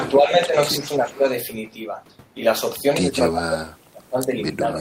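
Speech with two faults. From 0.19 to 0.55 s and 0.79 to 1.25 s the voice dips by roughly 10 dB, and from 3.04 s to the end it sinks much further, by around 30 dB. This is speech suppressed in double talk, likely an echo canceller ducking the near talker while the far side speaks. The level drops, unlike a dropout's clean silence. At 0.85 to 0.92 s and 1.09 to 1.18 s, faint copies arrive 337 ms late, about 20 and 25 dB below the voice. This is echo leak, likely residual loudspeaker pickup getting past cancellation. It is a separate delayed repeat, not room reverberation smearing the original.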